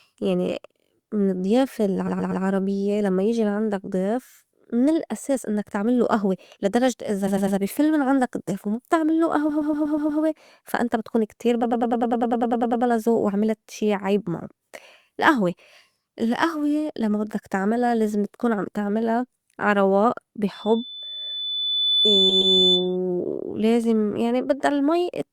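A stutter replays short stretches at 2.07, 7.27, 9.49 (after "عندك الضّيف وما بتعملّو"), and 11.63 s (before "زوق وعملت شي عيب"). These are repeated frames: blocks of 100 or 120 ms are played again, up to twelve extra times, adding as much as 1.2 s. From 20.53 to 22.97 s, after "تعملا عا رواق بي", a 3.5 kHz tone swells over about a second and a half to roughly 5 dB above the speech. This is loudspeaker feedback squeal, where the microphone hears its own loudspeaker and the loop runs away at one frequency. Within it, at 22.29 s, another 120 ms block repeats twice more.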